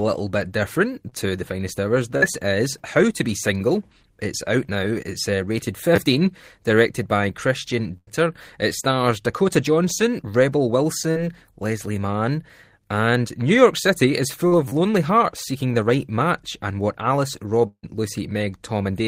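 Just after "to the finest hours", at 2.17 to 2.38 s, a burst of packet loss leaves about 40 ms missing. The receiver carries the last sound forward and fades it, so a spectrogram shows smeared, decaying energy before the audio resumes further on.

At 5.96 s, after "uh rated", a repeated buffer plays one 10 ms piece twice more. It is heard as a brief buzz, and the waveform shows identical copies with hard joins.

A second burst of packet loss, at 7.97 to 8.09 s, drops about 100 ms. The concealment continues the last sound and fades it, visible as a dimming smear.

Short concealed packet loss at 14.47 to 14.53 s hides about 40 ms behind a brief smear, seen as a slightly blurred patch in the spectrogram.

At 14.68 to 14.72 s, just before "lonely hearts seeking the", a repeated buffer loops a 10 ms piece four extra times. This makes a buzzy stutter, with a row of identical cycles in the waveform.

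At 17.67 to 17.85 s, about 160 ms of audio is gone. The continued last sound fades into roughly 60 ms of silence, which shows as a flat line in the waveform. This is likely a long network dropout.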